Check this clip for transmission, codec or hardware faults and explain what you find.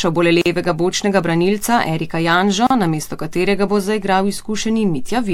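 The speech has two gaps at a join of encoded pieces. At 0.42 to 0.46 s, between "bo le" and "bočnega branilca", a silence of about 43 ms opens. A second gap of about 36 ms at 2.67 to 2.70 s comes just before "namesto katerega bo zaigral".

Each piece was encoded separately and joined untrimmed, so the encoder's start-up delay and final-frame padding remain as silence. Its edges are smeared by the codec. Unlike a dropout, the sound resumes exactly where it stopped, with nothing missing.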